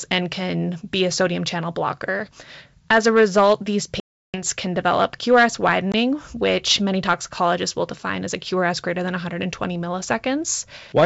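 Packet loss on an ADPCM call: a run of packets went missing and were filled with silence, knocking the decoder's predictor and step size out of step. After "a result these" a hard-edged 340 ms gap runs from 4.00 to 4.42 s, and "can develop" resumes slightly distorted. A 20 ms hole at 5.92 to 5.95 s precedes "which many toxicologists will".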